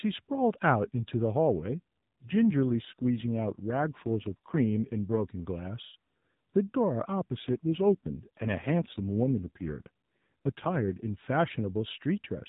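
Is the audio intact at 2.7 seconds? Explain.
No, that's inside an AMR rate drop from 1.54 to 5.21 s. The codec falls back to a leaner mode, likely around 5.9 kbps, so the speech turns rougher and buzzier without any gap.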